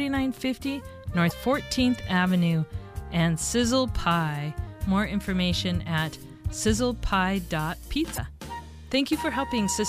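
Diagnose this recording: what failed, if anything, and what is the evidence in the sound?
Two brief glitches break into the sound, one at 1.27 s and one at 8.14 s, each lasting about 40 ms before the audio carries on. These point to damaged data in a compressed stream, a fault at the codec stage. Corrupted bytes reached the decoder, which misread those frames, lost sync and hunted for the next valid frame header. The garbage it decoded in the meantime comes out as these short glitches.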